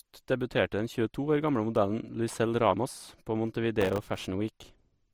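Throughout the speech, the sound carries two overlapping layers of coding artefacts, the different artefacts heard together. Nothing is present above about 20.2 kHz. This is most likely transcoding between lossy codecs, with an MP3 stage near 61 kbit/s followed by Opus near 48 kbit/s. The second encoder spent bits re-coding the first one's artefacts while adding its own.

From 3.81 s to 4.19 s a burst of processor overload crackle rides on the speech as a dense, gritty tearing. The processor repeatedly failed to deliver audio buffers on time, and each missed buffer was replaced by silence, leaving a hard-edged dropout. The misses involve very short buffers of roughly 1.5 ms, with about thirty misses over the stretch. The crackle stops once the load eases.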